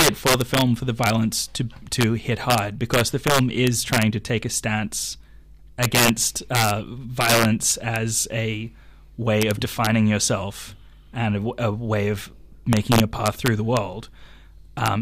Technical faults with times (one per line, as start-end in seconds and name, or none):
0.00-15.02 integer overflow